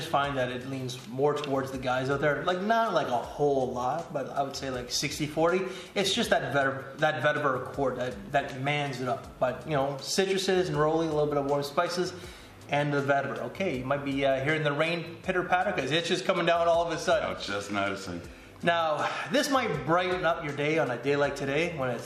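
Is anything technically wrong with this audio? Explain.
No, nothing technically wrong can be heard in this audio. Nothing points to a fault anywhere in the signal chain.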